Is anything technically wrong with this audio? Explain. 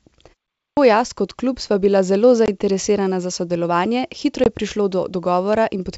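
Yes. At 0.58 s, after a short pause, the start of "jaz kot klub sva" is cut off by a clipped start after a pause. The playback device was asleep and woke about 190 ms late. Unlike harmless muted pauses, actual speech is lost.

At 2.46 s after "klub sva bila zelo" and at 4.44 s before "je prišlo", there is packet loss on an ADPCM call. Each time a 20 ms hole, about one packet, is filled with silence. The decoder then restarts out of step, leaving the speech slightly distorted for a moment mid-phrase rather than a missing onset. The underlying wideband coding sounds clean, consistent with G.722 at 64 kbit/s.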